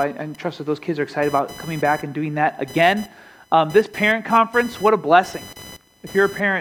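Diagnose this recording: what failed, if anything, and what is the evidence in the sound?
Computer activity noise runs through the whole recording, from start to finish. It is a buzzing, chirping layer with a pulse rate around 1 kHz, sitting roughly 25 dB below the wanted sound. It rises and falls on its own schedule rather than tracking the audio, which places the failure in the analogue wiring. Load changes in the host's processor, graphics or peripherals disturb the ground the audio circuit shares, injecting that switching pattern into the signal.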